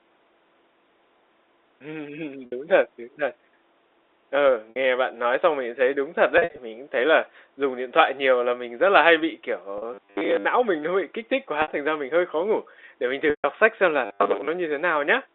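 Brief held, buzzy smears interrupt the speech at 2.46–2.52 s, 4.70–4.76 s, 6.38–6.58 s, 9.78–9.82 s and 11.62–11.68 s, and the speech fades into silence at 13.30–13.44 s. This is packet loss with pitch repetition: the receiver bridged each gap by repeating the last pitch period, for 60 ms in three cases. The gap at 9.78 s, just after "là hay bị kiểu", is shorter at 40 ms. The 6.38 s stretch has 140 ms lost, scattered over 200 ms, with no run longer than 60 ms. The 13.30 s gap, between "khó ngủ để mình" and "sách xem là", loses a full 140 ms.

From 9.94 to 10.45 s, between "là hay bị kiểu" and "não mình nó bị", the speech turns into a rigid, metallic 100 Hz buzz. The same buzz returns at 14.06–14.48 s. This is a robotic sound from repeated short buffers. The likely cause is audio arriving too seldom, so most of it is replaced by loops of the last fragment. A 100 Hz buzz fits a 10 ms buffer.

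All of this plays through the narrow 300 Hz to 3.7 kHz band of G.711 telephone coding.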